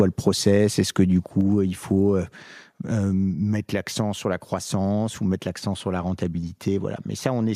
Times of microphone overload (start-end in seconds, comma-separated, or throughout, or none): 0.28-0.48